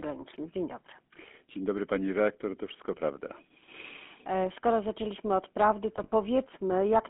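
A speech clip carried over a narrow telephone-style line, with the GSM full-rate codec colouring it throughout. The band runs from about 250 Hz to 3.4 kHz, so the low body and the upper sibilance are gone. The codec damage is plainly audible as a buzzy, gravelly roughness. This comes from the codec rebuilding the voice from a vocal tract model, excited by a sparse, regular pulse train rather than the real waveform. The sound fits the 13 kbps full-rate coder. Between 5.96 and 6.13 s there are lost GSM frames. About 80 ms of audio drops out, scattered over 160 ms. The longest gap is only a few tens of milliseconds. During each gap the decoder repeats the settings of the last good frame. This is heard as a brief, rough metallic ring instead of silence. The pattern fits about four missing frames.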